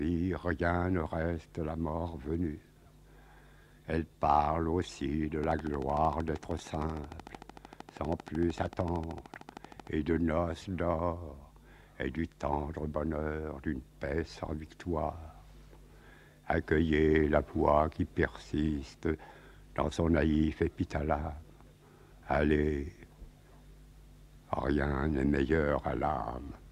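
From 5.44 to 9.88 s a steady ticking runs over the sound, about 13 sharp clicks per second, evenly spaced and alike in shape, peaking roughly 5 dB above the audio. This train of clicks is likely interference or a faulty connection injecting repeated pulses.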